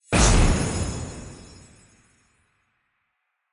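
The clip is a recording of sounds. No technical fault can be heard anywhere in it.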